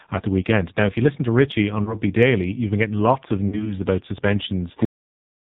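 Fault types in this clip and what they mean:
AMR narrowband mobile codec: Low-rate mobile speech coding leaves the sound buzzy and synthetic, fitting roughly 6 kbps; the spectrogram shows nothing above 4 kHz throughout.
Lost AMR speech frames: At 1.84 s a short dip suggests one missing frame. After "been getting lots of" (3.48–3.76 s), concealment smears pitch, visible as a faded, blurred spectrogram patch.
Cut-off end: At 4.85 s the audio halts mid-sound and drops straight to digital silence; the waveform ends abruptly with no decay tail.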